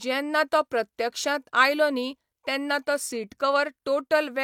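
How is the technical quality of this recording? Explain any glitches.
No technical glitches can be heard anywhere in this speech recording. The audio runs continuously, with nothing that calls for an explanation.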